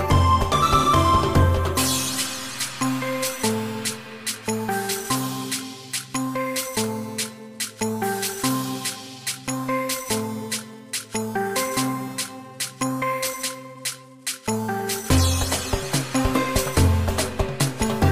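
No technical faults are audible anywhere in the audio.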